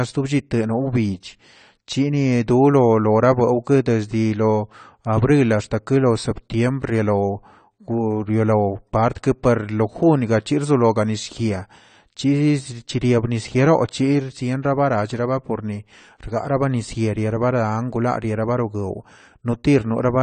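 Throughout the speech, the sound is dull and smeared, with a warbling, fizzy edge on sibilants, likely caused by AAC compression at a low bitrate, consistent with about 32 kbps. A spectrogram shows a hard ceiling at 9 kHz.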